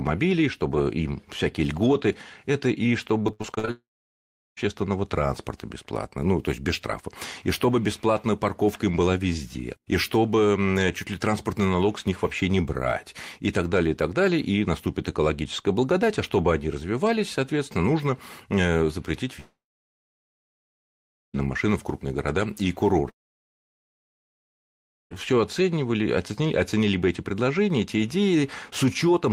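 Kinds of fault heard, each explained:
Repeated packet loss (robotic sound): From 3.23 to 3.69 s the speech breaks up into short choppy fragments with a robotic edge. Eight small holes fall inside this half second. Each hole is filled by stretching the sound just before it. The longest gap is about 72 ms, and roughly half of the stretch is patched sound rather than real speech. The holes come too close together for the patching to hide them.
Long network dropout: The speech stops three times. Each time a fading buzz trails off into silence, and the speech returns with a chunk missing. The first gap runs from 3.71 to 4.64 s, just before "транспорта бесплатно ну то", with about 0.7 s of silence. The second runs from 19.40 to 21.36 s, between "соответственно нужно э запретить" and "машинам в крупные города". The third runs from 23.10 to 25.13 s, after "в крупные города и", and is almost entirely silent. 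The likely cause is a network outage during which no audio arrived.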